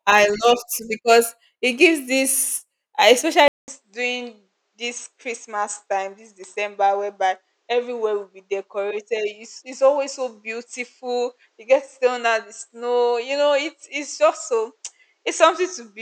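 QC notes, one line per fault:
3.48 s to the end: input switched to a poorer device. After a gap of about 200 ms the speech comes back duller and a few dB quieter, with nothing above 8.4 kHz, so the top octave just vanishes. A faint new noise floor sits well under the speech, about 50 dB down. Most likely the recording jumped to a different, band-limited microphone, which brings its own narrower response, lower gain and background hiss for the rest of the clip.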